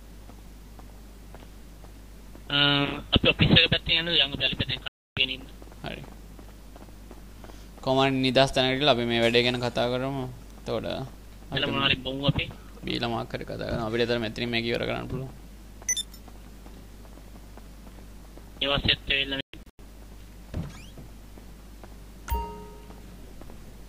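Digital broadcast dropouts occur at 4.88 s and again at 19.41 s. The receiver stops getting usable frames and mutes until clean data returns. The programme content from those moments is lost, not delayed. The first is a single clean hole of about 0.29 s, ending at 5.17 s. The second breaks up into several short gaps spread across 0.38 s, to 19.80 s. Those gaps total 0.26 s, and the longest runs 0.13 s, a stutter that fits a string of failed frames.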